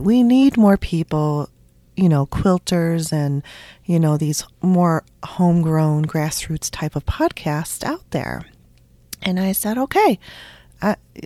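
No faults are present in this speech recording; nothing in it calls for correction.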